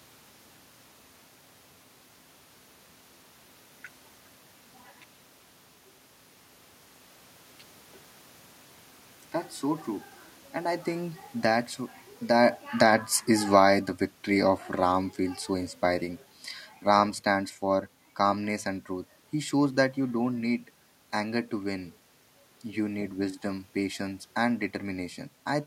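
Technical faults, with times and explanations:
11.43–20.36 s, automatic gain falling: the gain control judged the input too loud or its background noise too strong and eased it down about 9 dB, so speech and room noise sink together.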